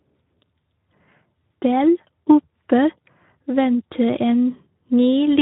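Hoarse, grainy speech runs through the whole clip, the unmistakable mark of the Speex codec. Speex is a CELP coder built for older VoIP and game chat. It models the voice with a simple filter plus an excitation signal, and at a low setting too few bits reach that excitation, so it is rebuilt only coarsely. The damage here is plainly audible and fits a setting around 11 kbps.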